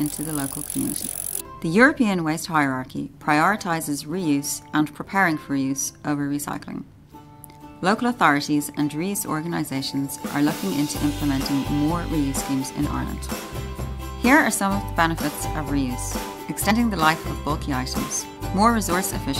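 At 1.0 s the audio jumps forward by about 50 ms, and at 16.7 s by about 70 ms. These are compressed frames skipped, where whole coded frames never reach the output. Each jump fits two, then three, 23.2 ms frames. Overlapping frame windows blend each join into a short smeared blip rather than a sharp click. A waveform shows an abrupt change of envelope with no gap. A spectrogram shows a sudden discontinuity softened into a faint vertical smudge.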